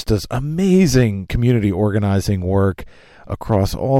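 Hard clipping shows up three times in this speech: 0.96 to 1.03 s, overdriven by about 3 dB, then 3.52 to 3.56 s by about 2 dB, and 3.96 to 3.98 s by about 1 dB. Peaks exceed what the stage can pass, get sliced flat, and crackle briefly.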